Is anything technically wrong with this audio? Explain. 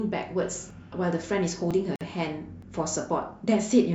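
Yes. The speech has two kinds of fault.

At 0.70 s, 1.71 s and 2.62 s the sound jumps forward. There is no silence at these points. Each one is likely a dropped buffer (overrun). In that case the recording software failed to collect its samples before the hardware wrote over them. The material on either side is then spliced directly. The first two skips lose about 20 ms each. The one at 2.62 s loses closer to 70 ms.

From 1.96 s to 2.01 s a 51 ms gap opens in the speech, which then resumes exactly where it left off. This is a gap at a join of encoded pieces. The audio was encoded in separate segments and then concatenated without trimming. Each segment's leading encoder delay and final-frame padding stayed in place as silence. The edges of the gap are smeared by the codec.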